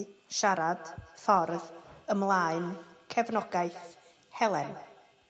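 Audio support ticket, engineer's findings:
Speech returning at a steady interval, roughly a fifth of a second, from 0.74 s to clip end; repeats thin, ringing, peaking about 18 dB below the talker. Feedback echo between two devices: second device replays this mic's audio, mic recaptures it, local canceller can't remove it.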